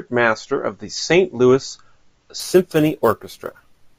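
Speech clip where, from 2.40 s to the end, a bright metallic fizz rides on the sound: imaging from sample-and-hold upsampling, with each sample simply repeated to go from 16 kHz to 44.1 kHz. Mirrored copies fill 8 to 16 kHz about 22 dB down. Unlike steady hiss, this fizz rises and falls with the speech and moves opposite to its pitch.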